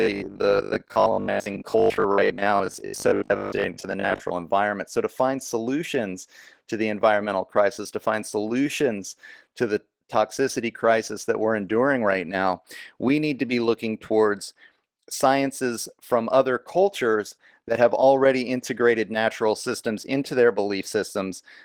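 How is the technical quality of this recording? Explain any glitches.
The technical quality suffers from two faults: a robotic buzz over the opening seconds and plainly audible codec damage across the whole recording.

Robotic sound from repeated short buffers, from 0.02 to 4.32 s: the speech takes on a rigid, metallic buzz at 50 Hz. The likely cause is audio arriving too seldom, so playback repeats 20 ms chunks, which fits that rate, with roughly half the material repeated while real audio is skipped.

Opus voice compression, throughout: the sound points to about 16 kbps in hybrid mode, with SILK's linear-prediction coder handling the lower band and a CELT layer above 8 kHz, in 20 ms frames. Coarse coding of the excitation leaves plainly audible damage to the speech.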